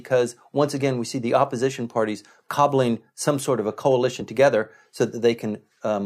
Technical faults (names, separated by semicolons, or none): damaged data in a compressed stream